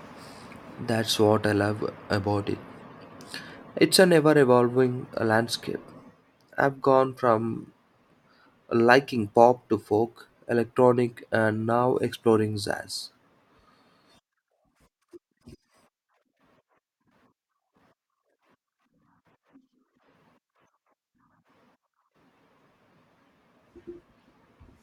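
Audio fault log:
5.51 s, dropped samples: a single sharp click just after "a never evolving", seen as a thin vertical line across the spectrum. A handful of samples, roughly a tenth of a millisecond, likely went missing, so the waveform jumps abruptly to a later value.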